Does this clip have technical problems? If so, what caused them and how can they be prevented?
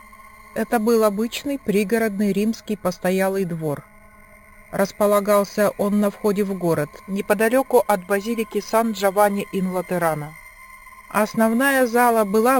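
Yes, there's imaging from sample-and-hold upsampling running through the whole clip. It sounds like the audio was taken from a rate around 11 kHz up to 48 kHz by just repeating each sample, with no smoothing filter. That leaves mirrored copies of the spectrum, the first one filling roughly 5.5 to 11 kHz at about 19 dB below the signal, so you get a metallic fizz riding on top. To prevent it, upsample with a proper interpolating low-pass filter.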